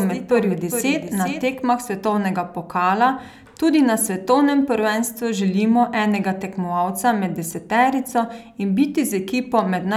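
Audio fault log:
0.00–1.48 s, doubled audio track: The speech is already heard twice as the clip opens. A full-band copy trails around 400 ms behind, roughly 10 dB quieter, with no room decay. It stops abruptly before "svetovnega pokala tudi na". A slower second capture path is likely.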